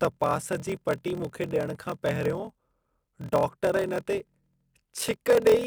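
Speech throughout carries a block size mismatch (padded): zero-filled gaps buzz at 41.7 Hz, fitting 1024-sample blocks, and the audio runs at 0.889 speed, yet timbre stays, unlike a sample-rate mismatch.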